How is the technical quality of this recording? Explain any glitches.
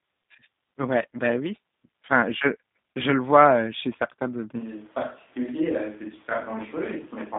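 The technical quality is poor. The speech stays intelligible, but two faults stand out.

Throughout the clip the voice sounds narrow, slightly rough and synthetic. This is plainly audible G.729 codec damage, at 8 kbit/s in its G.729A form. The codec rebuilds each 10 ms frame from a vocal tract filter, a pitch predictor and a handful of pulses rather than the real waveform, which causes the buzzy texture. Only a telephone-style band from 150 Hz to 3.7 kHz survives, so there is no depth and no crisp top.

At 4.61 s the sound abruptly turns hollow and roomy, loses bass, drops by around 5 dB and gains background noise roughly 25 dB below the speech. It stays that way to the end. The cause is likely a switch to a distant microphone, with the close microphone's feed failing or being dropped and a farther pickup, such as a camera mic, taking over.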